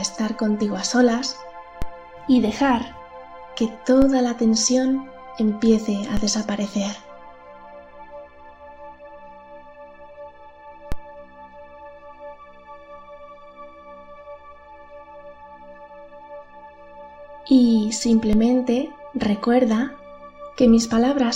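A low thump or click punctuates the sound at 1.82, 4.02, 6.17, 10.92 and 18.33 s, while the material itself carries on unchanged. Each one is a DC step: the waveform's zero line suddenly jumps by about -12 to -13 dBFS, then drifts back as a 5 Hz high-pass drains the offset away. That sudden shift of the baseline, not anything in the sound, is what produces each thump.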